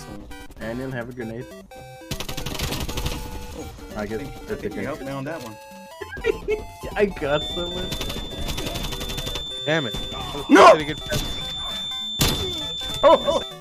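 At 7.24 s a feedback whistle appears and stays until the clip ends at 13.6 s. It is a thin, steady tone at 3.5 kHz. It sits roughly 10 dB under the main sound. Its level swells and fades slowly but never builds into a howl. The likely cause is a loudspeaker-to-microphone loop held just at the edge of feedback. One high frequency keeps circulating through that loop. It rings on behind the sound without running away into a howl.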